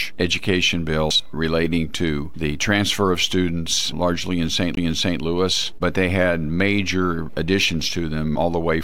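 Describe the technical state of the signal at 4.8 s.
A CD skip runs from 4.75 to 4.77 s. A knock or a flaw in the disc threw the laser onto another turn of the spiral, so the player muted for about 20 ms, giving a tick or short gap, and then resumed from a different place. What sets it apart from a plain dropout is that the sound does not pick up where it left off. It jumps by a whole number of disc revolutions, so material is skipped or repeated rather than just briefly silenced.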